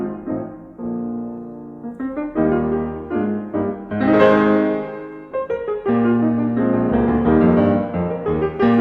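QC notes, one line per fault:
No faults heard anywhere in this music clip.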